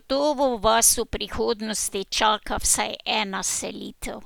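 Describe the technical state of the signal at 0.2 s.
At 0.2 s the speech signal is intact, with no audible fault at that moment.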